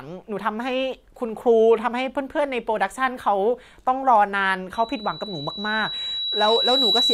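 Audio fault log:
4.74 to 7.14 s, loudspeaker feedback squeal: partway through the speech a pure tone at 3.9 kHz creeps in and swells over about two seconds, ending up a few dB above the speech itself and running right to the end of the clip. That's the mic hearing its own loudspeaker, with the loop gain tipping past one at 3.9 kHz, so that single frequency keeps feeding itself and grows into the squeal you hear. Nobody breaks the loop before the clip ends.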